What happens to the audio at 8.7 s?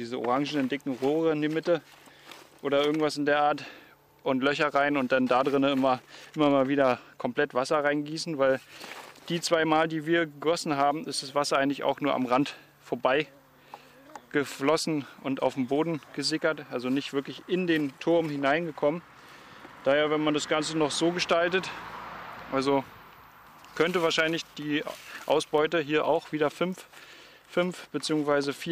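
Nothing goes wrong at 8.7 s; the audio plays through that moment intact, with no dropout, glitch or distortion.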